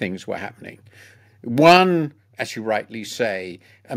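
Input gain likely set too high drives the speech about 3 dB past the converter's limit between 1.65 and 1.74 s, so microphone overload flattens roughly 7 percent of samples into a harsh crackle. At 1.77 s, just before "as you", the software likely reacted by stepping the microphone volume down, dropping speech and background together by about 4 dB.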